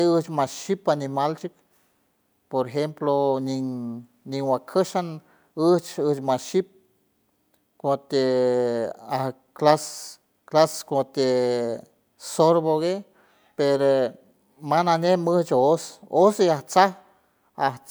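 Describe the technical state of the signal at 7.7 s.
At 7.7 s the speech signal is intact, with no fault to be heard at that moment.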